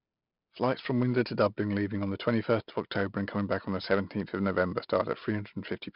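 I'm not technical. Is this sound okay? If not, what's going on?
No. The speech has heavy 4-bit ADPCM compression damage from start to finish. This method saves each sample as a small step from a guess, which leaves a gritty hiss that grows with loudness. Nothing above 5.3 kHz survives, so it also sounds dull.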